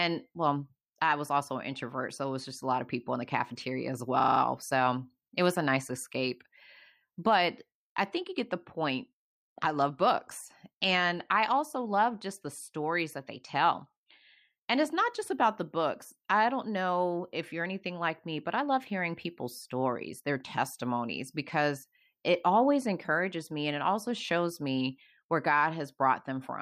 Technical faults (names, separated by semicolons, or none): system hang loop